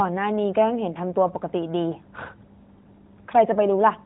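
Nothing here counts as a technical fault; what you hear is simply the speech carried over an AMR narrowband mobile link at 12.2 kbps, with nothing above 4 kHz getting through, and nothing goes wrong along the way.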